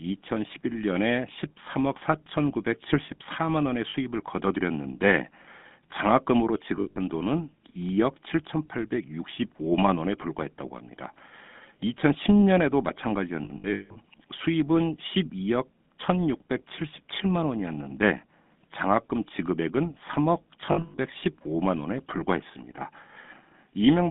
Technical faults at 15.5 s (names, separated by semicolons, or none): GSM full-rate codec